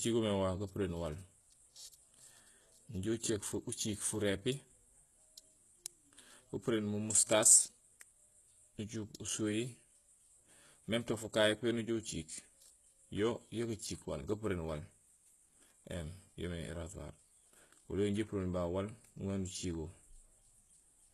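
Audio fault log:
Throughout: HE-AAC compression. Everything above 12.3 kHz is gone, and the treble below that sounds copied up rather than real, so s sounds come out gritty and lispy. That's likely spectral band replication at a very low bitrate, around 16 kbps.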